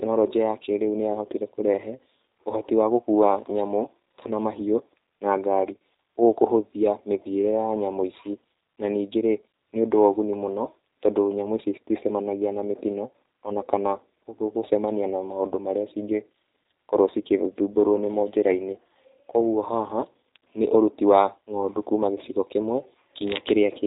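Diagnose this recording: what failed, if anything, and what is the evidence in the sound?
Codec stage: G.729 codec damage runs throughout, plainly audible as rough, slightly synthetic speech. A spectrogram shows a hard ceiling at 3.8 kHz with smeared, frame-blocky harmonics below. That fits an 8 kbit/s coder rebuilding speech from a vocal-tract filter and sparse pulses.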